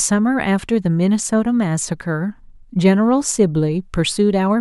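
No technical faults can be heard anywhere in the recording; the speech signal stays continuous and steady throughout.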